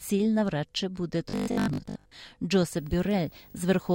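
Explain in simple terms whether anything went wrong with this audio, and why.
Between 1.30 and 2.12 s, new audio likely arrived too slowly, so the software kept replaying the last 20 ms or so in place of most of the real speech. This robotic sound from repeated short buffers locks the voice into a stiff, metallic 50 Hz buzz.

From 2.77 s to the end, a screen or video cable leaked into the audio path. This video or display buzz is a 50 Hz hum with hissy hash above it, plus a thin, very high 15.6 kHz whine, sitting faintly under the speech.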